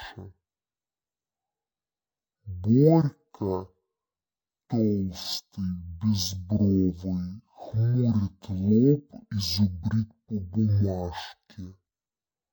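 Stereo read as mono runs throughout: alternating left and right samples are played as one channel, so the sound moves at half speed and sits a full octave low.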